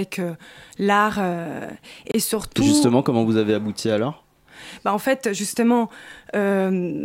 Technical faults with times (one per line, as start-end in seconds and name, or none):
2.11-2.14 Bluetooth stall